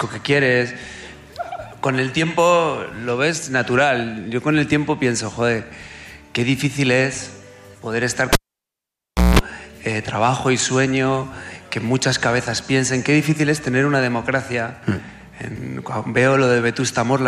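At 8.33 s a live cable is pulled and plugged in again, breaking the signal path until 9.39 s. A pop opens roughly a second of near silence, then about 0.2 s of 60 Hz mains buzz as only the tip touches, and a second pop restores the sound.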